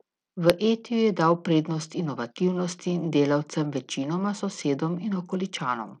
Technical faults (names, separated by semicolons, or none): Bluetooth SBC compression